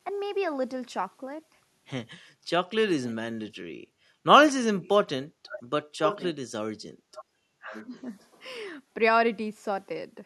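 At 3.07 to 3.14 s and 4.83 to 4.88 s, faint delayed copies of the speech, about 1.07 s behind and roughly 20 and 30 dB down, are likely echo leak: the far-end canceller let loudspeaker pickup through. They show as weak repeated spectral patterns. Background gated by the echo canceller appears at 4.11 to 4.22 s and 5.27 to 5.43 s. The room noise dips about 11 dB for roughly 0.1 and 0.15 s, a brief notch in the waveform's noise floor. Echo leak returns at 5.46 to 6.27 s nearly as loud as the speech, then at 7.13 to 8.01 s about 20 dB down. Within that, at 7.55 to 7.93 s, the speech is suppressed in double talk. The canceller, likely caught between talker and echo, pulls the voice down by about 35 dB, leaving a near-empty gap in the spectrogram.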